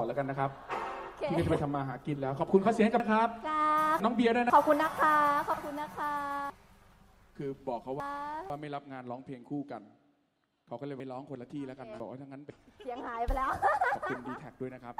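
The audio has three stretches where half-second chunks play in the wrong order. From 3.0 to 4.5 s, one chunk arrives two chunks late. From 6.5 to 8.5 s, one lands three chunks late. From 11.0 to 12.5 s, one is again two chunks late. Each is a case of chunks out of order. Nothing is lost, but the sound jumps back and forth and then resumes. Each stretch has three hard joins around a jumbled moment. The fault is in the delivery or writing of fixed 500 ms chunks.

At 5.53 to 5.62 s there is a brief garbled flutter. Two neighbouring blocks of about 40 ms each swap places. That fits two runs of two frames decoded in the wrong order, which is frames out of order. No time is lost.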